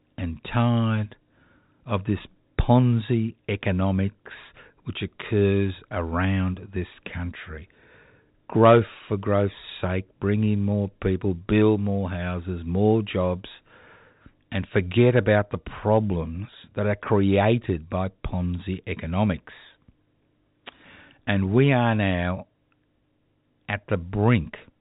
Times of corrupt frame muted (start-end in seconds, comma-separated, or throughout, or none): none